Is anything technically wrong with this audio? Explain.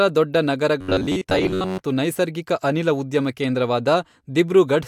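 Yes. From 0.81 to 1.80 s, just before "ನೈಸರ್ಗಿಕ ಅನಿಲ", there is robotic sound from repeated short buffers: a rigid metallic buzz near 94 Hz that loosely follows the syllables. The likely cause is starved playback looping roughly 11 ms fragments, skipping most of the real audio.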